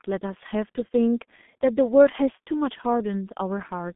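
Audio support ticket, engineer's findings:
Speech muffled and hoarse for the full clip; consonants smeared. Nothing audible above 3.7 kHz, band roughly 200 Hz to 3.5 kHz. Component: G.723.1 codec, heavy damage. Mechanism: 30 ms frames, slow-updating voice model, coarse low-rate coding, which fits the 6.3 kbit/s mode. Fast articulation blurs between frames and the top band is discarded.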